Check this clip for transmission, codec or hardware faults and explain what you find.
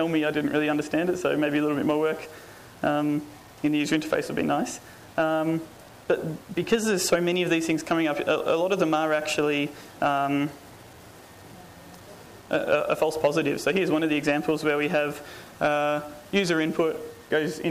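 One fault is present, and it runs through the whole clip: low bit depth without dither. The grainy distortion follows the sound, turning quiet passages gritty and making the faintest parts sputter between two levels or drop to silence. The likely cause is rounding to coarse steps, which fits roughly 7-bit resolution, with error only about 30 dB below the signal. A waveform shows visible staircase steps, and a spectrogram shows broadband grit tracking the signal's envelope rather than a steady noise floor.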